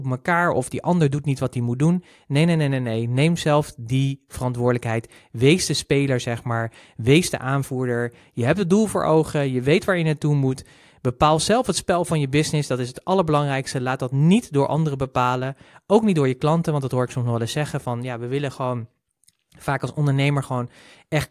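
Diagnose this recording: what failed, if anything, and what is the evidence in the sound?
Nothing in the speech recording points to a failure at any stage of the chain, from capture through conversion, processing and playback.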